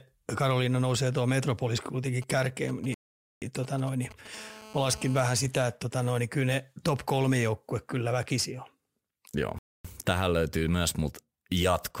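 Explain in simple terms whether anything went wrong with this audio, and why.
Several faults are audible in this speech recording.

Sample clock jitter runs through the whole clip. The converter's timing wobbles by a few microseconds, so each sample lands slightly off. It sounds like a faint hiss or grit riding on the speech, strongest on loud and bright sounds and gone in pauses.

GSM signalling bursts appear from 2.22 to 4.27 s. A nearby 2G phone was exchanging short radio bursts with the network, and the audio circuit picked them up as sound. The result is a galloping ticking pattern mixed with brief buzzes at about 217 Hz.

Two playback stalls cut the sound out completely, from 2.94 to 3.42 s (about 475 ms) and from 9.59 to 9.85 s (about 260 ms). The audio stops mid-flow and then resumes. The cause is likely the player running short of data or being held up.

GSM phone buzz follows from 4.34 to 5.22 s, once the phone moved into an active call. 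It transmits in a steady stream of pulses 217 times a second, heard as a hard, raspy buzz with many harmonics that has nothing to do with the speech.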